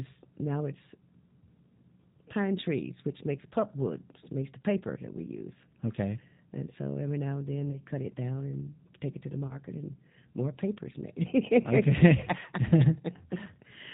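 It's a speech recording, and the whole thing carries the sound of the G.729 codec. Everything above 4 kHz is gone, and the voice has that slightly rough, synthetic edge you get when speech is rebuilt from a vocal tract filter, a pitch predictor and a handful of pulses per 10 ms frame, which fits G.729A at 8 kbit/s. The codec damage is plainly audible from start to finish. On top of that there are two spots of VoIP packet loss concealed by the speech codec, at 7.71 to 7.82 s and at 9.47 to 9.58 s. Each gap is about 30 ms of missing audio, which fits a single lost packet. The decoder fills it by extending its last pitch and filter settings at falling gain, so the sound is stretched into a short tone or noise that fades. Because every frame builds on the previous one, the voice stays a bit weak and off for a while after the gap, which is why each disturbance lasts around 110 ms instead of just 30.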